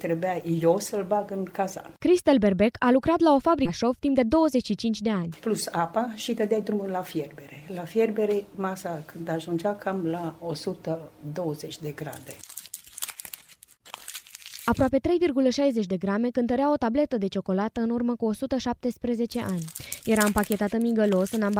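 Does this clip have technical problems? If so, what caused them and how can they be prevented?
Yes. At 3.65 to 3.67 s there is a skip ahead: the jitter buffer overflowed and discarded about a second of queued audio, so playback jumps straight to later material with no fill. Sizing the buffer to absorb bursts prevents this.

From 3.83 to 9.74 s a jitter buffer speed-up follows. The receiver kept trimming pitch-period slices to shrink an overfull buffer, removing about half a second in total, so the sound runs at 110% speed with unchanged pitch and feels rushed. Gentler, slower delay adaptation prevents it.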